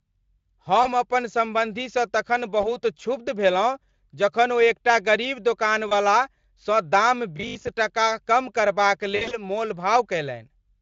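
Around 0.83 s, again at 2.61 s right after "अपन सम्बन्धीसँ तखन", and at 5.89 s after "जखन ओ एकटा गरीब", there's VoIP packet loss concealed by the speech codec. Each sounds like a single 20 ms packet gone, with the decoder stretching the last sound into a brief smear before recovering.

From 7.37 to 7.73 s, between "सँ दाम" and "टका कम करबाक", the speech turns into a stiff metallic buzz at 50 Hz. That's robotic sound from repeated short buffers: something like 20 ms chunks looping while a good share of the real audio is skipped, likely from late-arriving buffers.

The worst concealment is from 9.15 to 9.38 s, where the dropouts sound scattered over roughly 160 ms with a 60 ms stretch at the longest. The sound is stretched out and fades, and it stays weak for a moment after.

Underneath all of it, the Speex coding holds up well, with only mild roughness.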